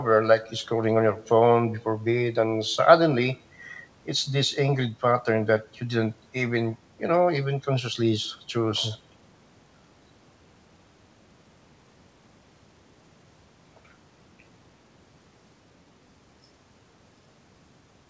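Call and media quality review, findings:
No faults found: the speech is band-limited with nothing above 8 kHz, consistent with a G.722 call path at around 64 kbps, and the signal carries no dropouts, clipping, level jumps or timing disturbances.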